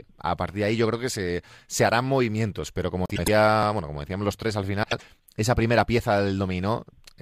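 At 3.05 to 3.28 s and again at 4.83 to 5.02 s the speech has frames out of order: two adjacent blocks, each about 104.5 ms long the first time and 78.4 ms the second, play swapped, giving a garbled flutter. No time is lost.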